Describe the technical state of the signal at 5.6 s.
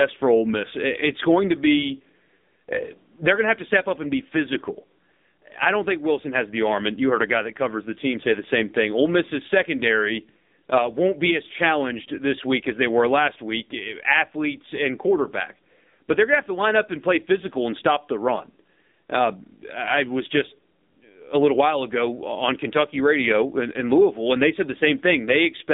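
At 5.6 s, as throughout, the speech runs through the AMR narrowband mobile codec at a low rate that fits roughly 6.7 kbps. Its sparse pulse-driven vocal-tract model leaves a buzzy, synthetic voice, confined to about 200 Hz to 3.7 kHz with nothing above 3.8 kHz.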